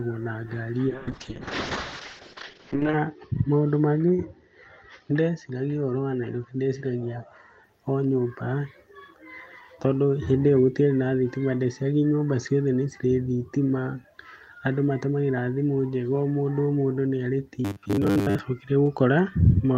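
Just after "na ngari", at 0.89 s, the sound turns coarse and dull. This is a call bitrate drop. The connection's estimated bandwidth fell, so the encoder had to spend far fewer bits. The quality fits a fall from about 32 to 6 kbps. High frequencies vanish above 8 kHz, where before they reached 20 kHz. The worst stretch lasts about 2 s. The muffled, watery quality persists until 7.69 s.

From 17.65 s to 18.40 s, right after "mũndũ nĩ arĩ", the speech becomes a stiff metallic buzz at 100 Hz. This is robotic sound from repeated short buffers. Fresh audio likely arrived too rarely, so the playback kept looping the last chunk to fill the gaps. A 100 Hz buzz points to chunks about 10 ms long. Most of this stretch, roughly 70 percent, is repeated material. The speech's rough shape survives underneath.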